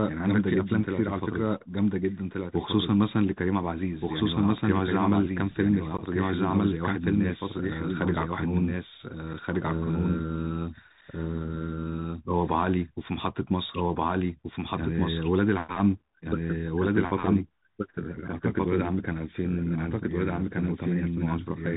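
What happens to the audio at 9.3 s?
At 9.33 s, unconcealed Bluetooth headset packet loss cuts a hole of about 7.5 ms, fitting a single lost voice packet: a sharp-edged gap on the waveform, after which the sound returns briefly quieter. The whole clip also passes through the Bluetooth CVSD headset codec, so the spectrogram shows nothing above 4 kHz and the speech carries gritty, granular hiss. A doubled audio track also runs throughout. A full-band copy at about equal level trails by roughly a second and a half, likely from a second capture path, and the spectrogram shows the same pattern repeated at that offset.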